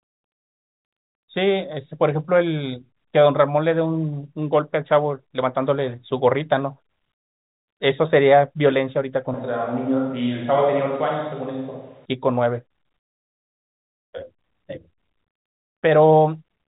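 From 9.34 s to 12.05 s the speech abruptly turns roomy and hollow, with thinner bass and room noise roughly 35 dB below it, though the level barely changes. This is likely a switch to a distant microphone, with the close pickup returning just as suddenly.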